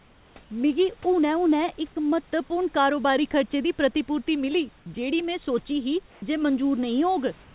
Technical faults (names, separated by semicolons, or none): sound dropped by the voice detector; comfort noise in place of the background